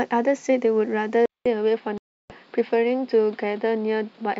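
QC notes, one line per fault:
1.26 s to end, input switched to a poorer device: The speech abruptly turns duller and boxier, with nothing above 5.3 kHz and a new background noise sitting about 35 dB under the speech. The loudness stays about the same. The change arrives with a short silence of about 200 ms. The likely cause is that the recording moved mid-take from the original microphone to a narrower-band device, such as a headset's call profile, which brings its own tone and noise floor.
1.98 to 2.34 s, packet loss on an ADPCM call: A hard-edged hole of about 320 ms cuts through the speech, which fits a burst of roughly fifteen lost packets filled with silence. When the speech resumes, it comes back slightly distorted, then settles within tens of milliseconds. The decoder's adaptive predictor and step size drifted out of step with the sender during the gap and need a moment to resynchronise. 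The underlying G.722 coding at 64 kbit/s shows no obvious damage of its own.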